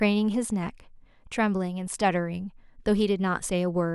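At 3.46 s there's a single sharp click, the kind you get from dropped samples: the likely cause is something like a sample going missing, so the waveform jumps straight to a later value. Far too brief to lose any speech, it shows as a thin vertical line.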